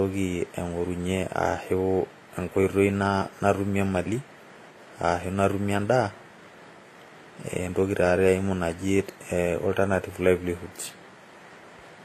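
A speech recording with transcoding between lossy codecs running through its whole length: the sound carries two different layers of coding damage at once. The watery, smeared high end points to a low-rate HE-AAC stage near 24 kbit/s, and the added swirling, pre-echo-like grit fits a later WMA 1 pass around 64 kbit/s, likely the result of re-encoding an already compressed file. On a spectrogram the energy stops at a hard ceiling near 14.9 kHz, with blotchy, patchy texture below it.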